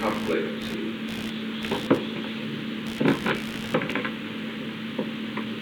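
A computer's shifting load is disturbing the shared ground of the audio circuit for the whole clip, producing computer activity noise: a buzzing, pulsing interference repeating around seventy times a second, sitting only about 15 dB below the sound and tracking machine activity rather than the audio itself.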